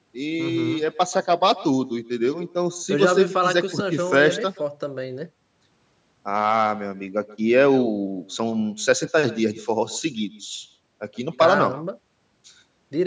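Every phrase, from start to finish, is trailed around 150 ms later by a faint, thin copy about 19 dB below the speech. It is echo with no canceller: the far end's loudspeaker leaks into its microphone, returning the voice, band-limited to 8 kHz by the call microphone processing.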